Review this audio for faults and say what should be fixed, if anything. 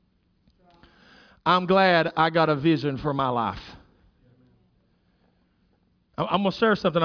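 Nothing to fix: no faults turn up anywhere in the speech.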